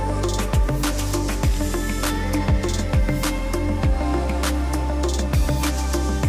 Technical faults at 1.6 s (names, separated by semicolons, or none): none